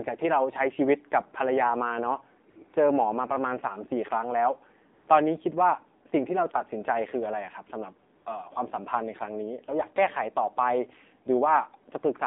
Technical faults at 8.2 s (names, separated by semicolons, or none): AMR narrowband mobile codec; AMR comfort noise